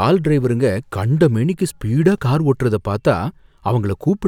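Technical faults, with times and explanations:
0.45 to 4.05 s, clock drift buffer slips: a click recurs every 0.6 s, about seven in all. Two devices likely run on separate clocks a few hundred ppm apart, so the buffer drifts until a few samples are dropped or repeated.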